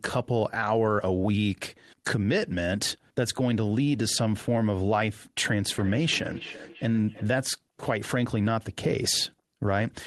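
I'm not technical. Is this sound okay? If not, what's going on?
No. From 5.78 to 7.38 s there's feedback echo between two devices: one plays the other's sound, which gets picked up again, repeating about every third of a second.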